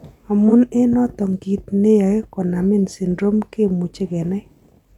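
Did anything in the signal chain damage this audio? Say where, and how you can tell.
Yes. AAC frame loss with concealment in the codec at 0.48 to 0.53 s: 43 ms of smeared, noisy sound patched from the last good spectrum rather than going silent.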